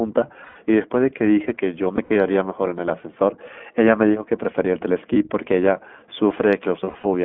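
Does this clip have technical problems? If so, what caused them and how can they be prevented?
Yes. The speech was carried by the iLBC codec, a narrowband VoIP coder that handles each frame on its own, which fits its 20 ms, 15.2 kbps mode. The result is a line band of 200 Hz to 3.4 kHz and a plainly audible rough, synthetic texture throughout. Using a wideband codec such as Opus would prevent this.

Lost iLBC frames occur at 0.44–0.57 s (120 ms), 1.96–2.17 s (scattered, longest run about 70 ms), 5.14–5.16 s (one 20 ms frame) and 6.84–7.07 s (scattered, longest run about 40 ms). The decoder filled each gap by repeating the last pitch cycle mixed with noise, so the gaps sound like held, buzzy vowels, and the speech recovers quickly afterwards. Forward error correction, an adequate jitter buffer and a more reliable network path would prevent this.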